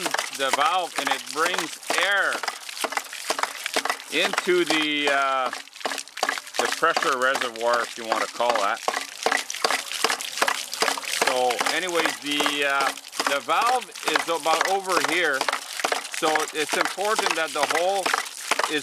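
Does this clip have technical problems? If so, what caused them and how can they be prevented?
No, this clip has no technical problems, so there is nothing to trace to a cause or prevent.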